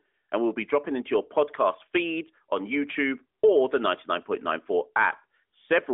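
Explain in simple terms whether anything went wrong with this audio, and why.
Nothing went wrong with this recording of speech. It has the narrow, telephone-like sound of the AMR narrowband mobile codec used on ordinary mobile calls, which keeps nothing above about 3.7 kHz and leaves a light trace of its own coding.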